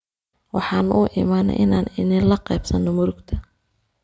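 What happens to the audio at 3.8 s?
Nothing goes wrong at 3.8 s; the speech continues intact through that moment with no dropout, click or distortion.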